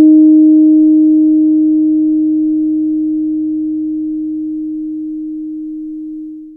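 No technical faults are audible anywhere in the recording.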